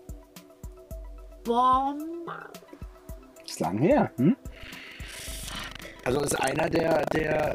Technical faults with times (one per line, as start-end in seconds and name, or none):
4.48-7.55 buffer tearing